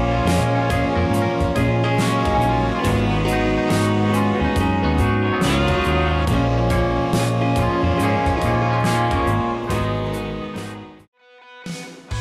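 Nothing goes wrong anywhere in this one, so there's no fault to point to at any moment.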